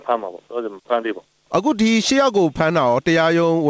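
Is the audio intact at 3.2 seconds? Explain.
Yes, at 3.2 seconds the audio is intact, with no dropout, glitch or other fault at that moment.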